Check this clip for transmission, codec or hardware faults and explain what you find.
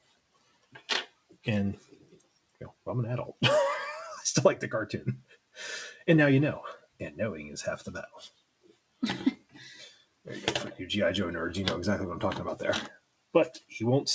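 A speech-oriented noise suppressor was left active on non-speech material, and it repeatedly mistakes parts of the sound for noise.

Noise suppressor applied to music or sounds, throughout: the suppressor treats steady tones, ambience and decaying tails as background and keeps adjusting its gain, with a swing of roughly 10 dB. Onsets survive while sustained parts sink, so the level pumps and the texture thins and flutters.

Sound cut by the noise suppressor, at 0.00–1.46, 1.79–2.86, 5.22–5.58, 6.77–7.00, 8.08–9.02, 9.37–9.56, 9.90–10.27 and 12.93–13.72 s: in these stretches the suppressor judged the material to be noise and pulled it down hardest, by about 16 to 18 dB at worst. Held and fading sound drops away or has its decay cut short.

The call path itself carries nothing above 8 kHz, which fits a G.722 wideband link, likely around 64 kbps.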